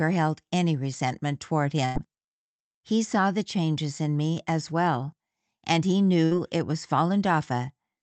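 At 1.85 s there's a burst of packet loss: a run of packets never arrived in time, so the receiver stretched the last sound for about 93 ms and faded it out, giving a held, dying sound before the speech picks up roughly 100 ms further along. The same thing happens at 6.25 s, briefer this time, with about 62 ms of fill covering 60 ms of missing audio, all through a call path that tops out around 8 kHz.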